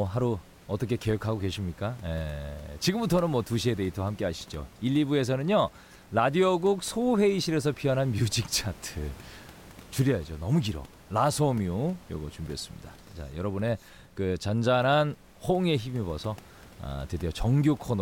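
Nothing technical goes wrong in this speech recording; the only extra sound is the room's own background noise, sitting about 24 dB below the speech, as any microphone in that space would pick up.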